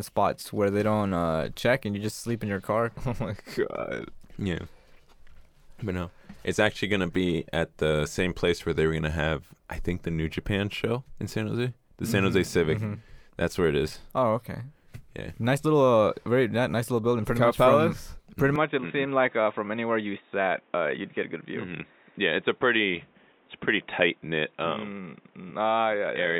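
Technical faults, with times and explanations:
18.56 to 26.39 s, input switched to a poorer device: the input likely changed to a narrower-band microphone or headset path, cutting everything above 3.8 kHz. The speech turns dull and boxy without a gap or level jump, over new background noise roughly 35 dB down.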